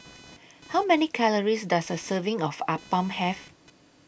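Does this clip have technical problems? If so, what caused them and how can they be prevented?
Yes: computer activity noise persists throughout, a buzz pulsing around 500 Hz and roughly 25 dB below the speech. Processor or graphics load shifts the shared audio ground, and the buzz comes and goes with that activity rather than with the speech. On a spectrogram it appears as horizontal stripes at 500 Hz multiples, independent of the speech. Prevent it by recording through an external, isolated audio interface or a ground-loop isolator.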